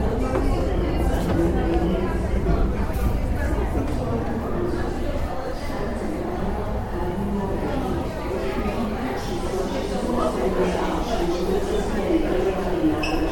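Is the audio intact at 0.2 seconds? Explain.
Yes, the audio is intact at 0.2 seconds, with no dropout, click or other fault at that moment.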